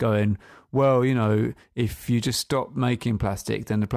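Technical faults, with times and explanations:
No technical faults can be heard in this speech recording. There is nothing to list against any time in it.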